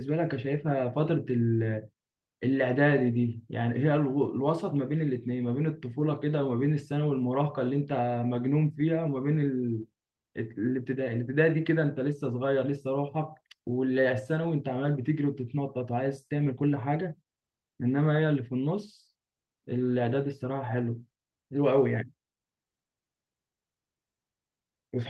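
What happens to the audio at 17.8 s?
Nothing goes wrong at 17.8 s: the speech continues intact there, with no dropout, click, glitch or other fault.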